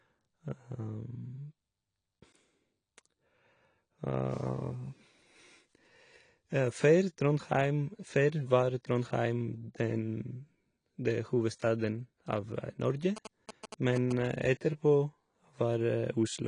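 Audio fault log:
Throughout: AAC compression, likely the cause of the dull, smeared quality heard from start to end. The speech has nothing above 10.1 kHz and a plainly audible warbling, fizzy texture on sibilants and held vowels, which fits low-bitrate AAC-LC at around 32 kbps. With too few bits per frame, the encoder drops the top band and leaves gaps elsewhere. On a spectrogram this shows as a hard ceiling at 10.1 kHz with patchy, blotchy holes below it.
13.17 to 14.13 s: GSM signalling bursts, heard as a galloping dit-dit-dit of short buzzes sitting roughly 10 dB under the speech. A nearby 2G phone exchanging brief radio bursts with the network was picked up and rectified by the audio circuitry, so the bursts turn into audible pulses repeating at 216.7 Hz. The waveform shows clustered rectangular spikes over that second. On a spectrogram they form vertical stripes with a comb of harmonics spaced about 217 Hz apart.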